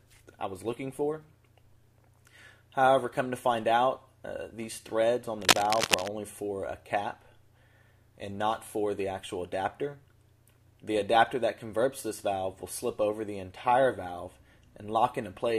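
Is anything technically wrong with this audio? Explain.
Yes. From 5.42 to 6.09 s there is cable scratch noise: dense, irregular crackling and rustling at roughly the same level as the sound itself. The likely cause is a worn cable or connector being moved, its contact resistance fluctuating rapidly.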